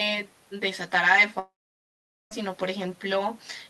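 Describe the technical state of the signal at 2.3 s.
A long network dropout runs from 1.39 to 2.33 s, so at 2.3 s the signal is at the very end of a gap. A brief fading continuation of the last sound gives way to about 0.81 s of near-silence, likely because a long stretch of audio never arrived. Speech resumes just after, with the lost part absent.

Channel delay (comb filtering) is also present here, as throughout the clip. One channel lags the other by roughly 10 ms, and summing to mono cancels shared content at evenly spaced frequencies starting near 50 Hz. The resulting fixed notches leave the sound hollow and phasey.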